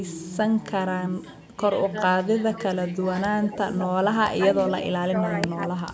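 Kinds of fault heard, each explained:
Speech suppressed in double talk: The talker's level sags in chunks, dipping by roughly 10 to 20 dB at its worst, around 1.9 s, from 2.34 to 3.05 s, 3.39 to 3.76 s, 4.35 to 5.14 s and 5.47 to 5.92 s. The likely cause is both ends talking at once, with the echo canceller unable to tell the near talker from loudspeaker echo, so it ducks everything to be safe.
Echo leak: A delayed copy of the speech trails in about 195 ms late, at 3.47 to 3.87 s, 4.66 to 4.86 s and 5.61 to 5.79 s. It's fairly strong in the middle stretch, a few dB under the direct speech, and barely there in the last. This is likely a speakerphone end whose echo canceller didn't fully scrub what its microphone heard, so some of it got sent back.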